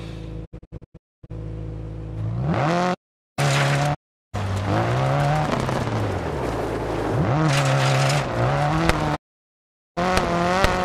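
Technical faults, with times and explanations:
0.44–1.32 s, 3.93–4.36 s and 9.15–9.99 s, digital broadcast dropout: the receiver stopped getting usable frames and muted, so the sound fades out over 20 ms and goes silent. The first event is broken into several short holes totalling 576 ms, the longest 256 ms. The second loses 384 ms, the third 800 ms. Loss steps of about 32 ms fit whole frames being discarded.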